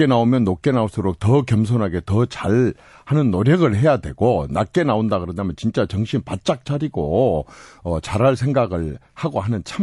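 Throughout the speech, s sounds turn watery and swirly, unlike a plain low-pass. That is likely MP3 compression, fitting a bitrate around 48 kbps.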